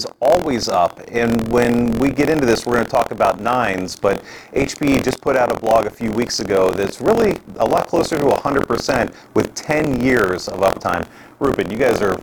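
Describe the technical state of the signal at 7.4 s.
At 7.4 s, as throughout the clip, buffer tearing: writer and reader overlap each period, splicing roughly a tenth of stale audio, producing a 43.1 Hz rattle that fits a 1024-sample buffer.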